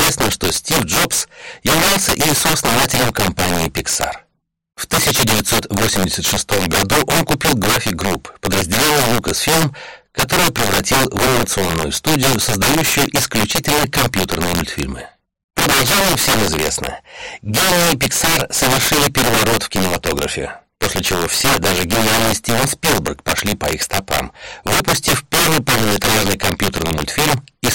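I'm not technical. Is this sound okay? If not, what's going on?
No. Throughout the clip, the loudest moments break into violent cracks. This is integer overflow: the level was pushed too high, and peaks that should have been capped wrapped around to the opposite extreme. Ordinary clipping only flattens peaks into fuzz; here a small share of moments snap sharply.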